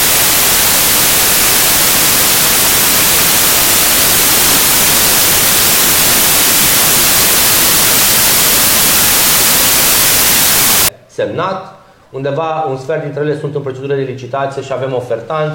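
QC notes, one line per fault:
0.00–10.89 s: samples built from the wrong bytes. Each sample's bytes are misassembled, so the fast-changing low bits become the large part of every value, giving loud, harsh broadband noise. Unlike added hiss, which stays steady underneath, this noise comes from the signal itself.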